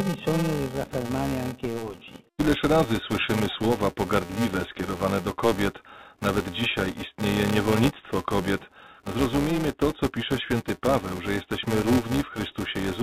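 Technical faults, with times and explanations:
throughout: filter restarted on every block. A steady buzz at 345 Hz rides under the speech, rising and falling with its level and vanishing in the pauses. A filter in the chain is dropping its memory at every block boundary and starting each block from silence, so each block begins with a small step transient. These clicks repeat at the block rate, which fits a 128-sample block, and together they fuse into a pitched buzz whose loudness follows the speech.
7.49 s: bit errors on a digital phone line. A short burst of sharp ticks and crackle breaks out over the speech, which itself passes through unchanged. On a G.711 A-law line, which otherwise carries the speech at its normal telephone band up to 4 kHz, a small fraction of bits flipped across a handful of frames. Each flip corrupts a single sample. When the error lands on the sign bit or a high-order bit, that sample jumps far from its neighbours and is heard as a tick.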